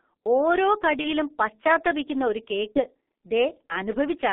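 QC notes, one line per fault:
throughout, G.723.1 codec: the speech is confined to roughly 250 Hz to 3.5 kHz, so it sounds thin and muffled, and heavy coding damage adds a hoarse, grainy texture with smeared consonants. The coarse, slowly updated voice model fits a 30 ms-frame codec at about 6.3 kbit/s. Unlike a simple telephone band-limit, the roughness comes from the coding itself, and band-limiting alone would leave the voice clean.
1.01 to 1.12 s and 2.72 to 2.81 s, VoIP packet loss concealed by the speech codec: at each point the speech briefly stretches into a synthetic sound that fades, and it stays weak for a moment afterwards. Each gap fits a single lost 30 ms frame that the decoder filled by repeating its last pitch and filter at falling gain. Unlike a dropout or a hard cut, there is no silence or click, only a synthetic smear that recovers gradually.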